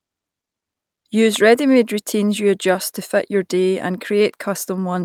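No technical faults can be heard in this speech recording, so there is nothing to place in time order.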